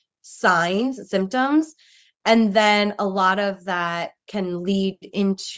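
No technical faults occur in this speech clip; the lowest bass is trimmed and nothing reaches above 8 kHz, as expected from a call's microphone processing.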